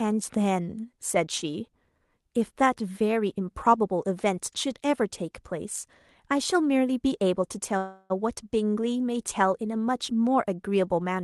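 At 7.77–8.12 s, a call audio freeze, likely a jitter-buffer underrun, stretches the last sound into a fading tone, shown as flat horizontal streaks on the spectrogram.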